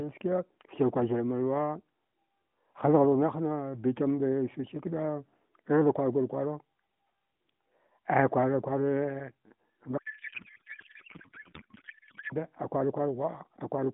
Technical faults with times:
9.98-12.34 codec payload misread

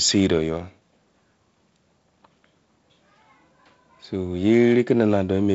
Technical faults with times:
none

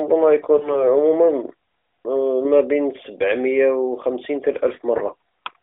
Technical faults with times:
0.58-0.89 lost AMR speech frames
4.98-5.03 lost AMR speech frames

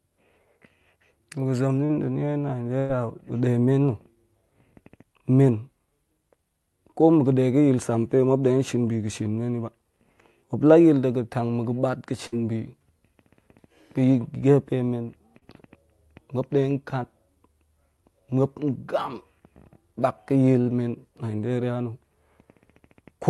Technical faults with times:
1.85-1.91 short concealed packet loss
2.79-2.91 burst of packet loss
12.27-12.34 burst of packet loss
15.38-15.43 short concealed packet loss

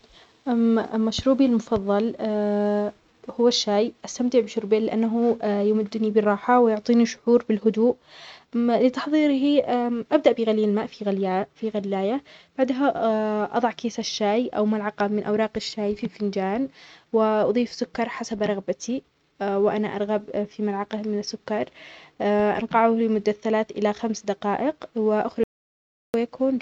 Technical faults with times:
25.44-26.14 audio dropout to silence

